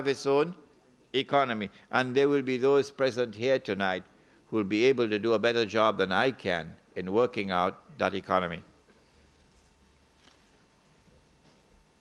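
No faults detected; the audio carries the usual coding texture of a call path, with the top end rolling off near 12 kHz, which fits an Opus stream at around 32 kbps.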